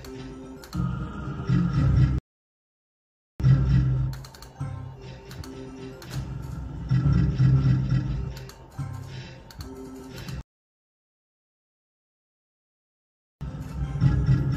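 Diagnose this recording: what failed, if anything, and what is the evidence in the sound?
Playback failed twice with a rebuffering stall: the player exhausted its downloaded audio and halted until more data arrived. The sound drops to silence at 2.18 s and resumes at 3.40 s, adding 1.2 s, then stops again from 10.41 s to 13.41 s, adding 3.0 s. Unlike a network dropout or packet loss, the audio picks up exactly where it left off, with nothing skipped or concealed. Only time is inserted.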